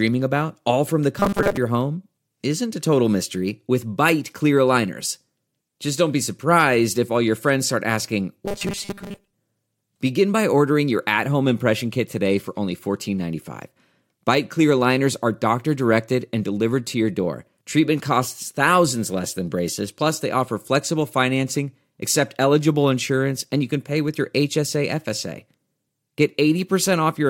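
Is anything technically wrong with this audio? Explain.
Yes. The speech has two bursts of robotic sound from repeated short buffers: 1.20 to 1.58 s, between "about all from the" and "your home isn't", and 8.46 to 9.33 s, right after "your friends start asking". The likely cause is audio arriving too seldom, so playback loops a 5 ms fragment and skips roughly 70 percent of the real signal. Those repeats impose a rigid 200 Hz metallic buzz that only loosely follows the speech.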